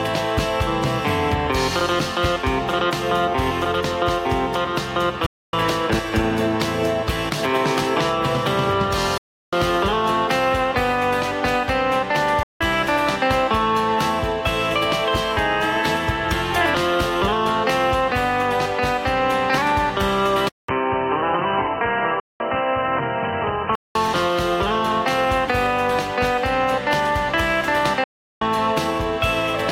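The first gap comes at 5.26 s, where the sound cuts out for about 0.27 s, then again at 9.18 s for 0.35 s and at 12.43 s for 0.17 s. Each hole starts abruptly or within a few milliseconds, and the audio picks up further along as though it kept playing underneath. That's a Bluetooth dropout, likely packets failing to reach the headphones in time and getting discarded.

At 20.49 s there's a 200 ms silence, and then the sound turns dull and boxy, with nothing above 3 kHz and a faint new noise floor sitting well below the signal. The level stays about the same, so it's the tone that gives it away. This is an input switched to a poorer device, likely a narrower-band mic or a headset call profile taking over. It clears up again at 23.95 s.

Inside that stretch, at 22.20 s, another dropout knocks out 0.2 s. A last one at 28.04 s loses about 0.37 s.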